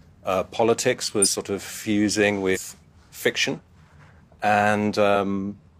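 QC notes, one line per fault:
1.21 to 1.28 s, compressed frames skipped. Just after "uh politics", roughly 100 ms of speech drops out.
2.51 to 2.59 s, compressed frames skipped. After "of fusing", the speech jumps ahead roughly 150 ms.
3.49 to 3.59 s, compressed frames skipped. Roughly 50 ms is lost.
5.11 to 5.16 s, compressed frames skipped. Roughly 100 ms vanishes where the undecoded frames fell out.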